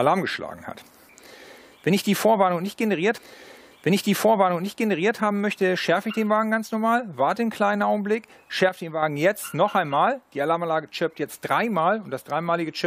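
From 8.69 to 9.03 s the level drops abruptly by about 6 dB, then returns, with the tone unchanged. One channel likely dropped out, halving the mono sum of matching channels. A waveform shows a stepped-down envelope, and a spectrogram dims evenly across all frequencies.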